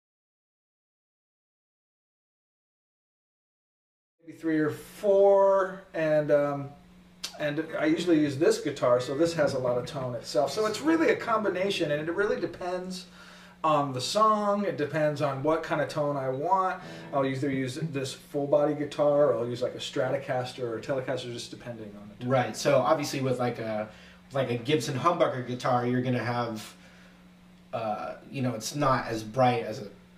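No technical faults can be heard in this audio. The level rises in a smooth, even fade-in from about 4 s that reaches full level at 4.73 s, with no click or hard edge.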